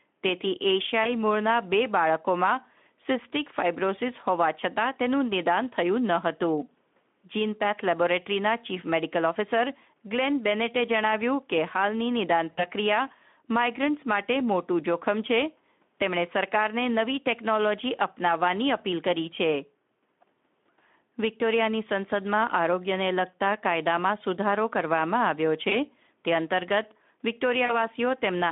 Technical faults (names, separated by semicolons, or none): VoIP packet loss concealed by the speech codec